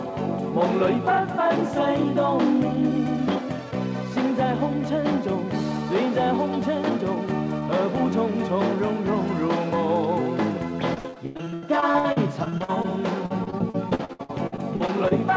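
From 10.94 to 12.86 s, and again from 13.26 to 15.13 s, the audio breaks into repeated packet loss with a choppy, robotic sound. Packets kept going missing, and each hole was filled by extending the preceding sound, roughly a third of the first stretch and a bit over a quarter of the second, with holes up to 93 ms and 62 ms long. On a waveform the envelope turns jagged and repetitive. A spectrogram shows smeared, duplicated frames, with nothing above 8 kHz, which fits a G.722 call path.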